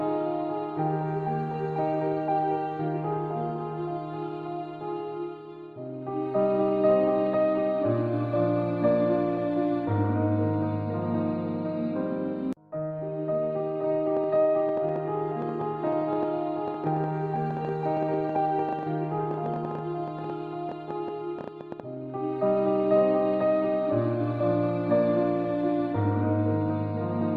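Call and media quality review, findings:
Train of clicks, 14.17–21.81 s: irregular ticking, about 8 per second, roughly 70 total, peaking about 10 dB over the audio. Likely external interference or a struggling interface injecting pulses.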